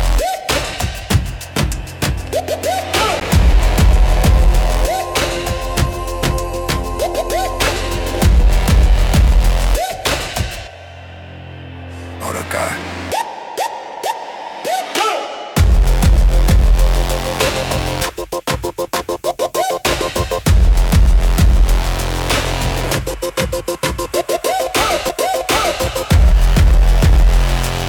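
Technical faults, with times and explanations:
3.20 s and 25.09 s, CD skip: at each point the laser loses its place on the disc's spiral track and lands on another turn. The player briefly mutes, for about 10 ms at 3.20 s and only a few milliseconds at 25.09 s, and then resumes from a different spot. The result is a short tick followed by an abrupt discontinuity, as the sound picks up at another position in the material.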